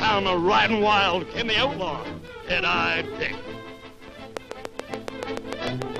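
A train of clicks runs from 4.37 s to 5.97 s: about ten sharp pulses at a steady 6.9 per second, each much the same shape and standing well above the surrounding sound, peaking at roughly 15 dB over it. They come through as a regular ticking laid over the audio to its end. Something outside the programme is injecting these pulses, likely electrical interference from nearby equipment or a faulty connection or power supply.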